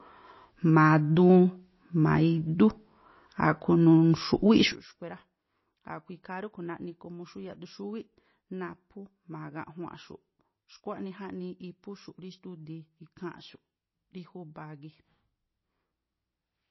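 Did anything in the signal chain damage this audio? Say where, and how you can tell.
Yes. MP3 compression runs throughout at the codec stage: nothing above 5.8 kHz, with a watery swirl on the speech, likely a low-bitrate encode around 24 kbps.

A sudden gain jump at 4.72 s drops speech and background together by about 18 dB until the end, likely an unramped digital gain change in processing.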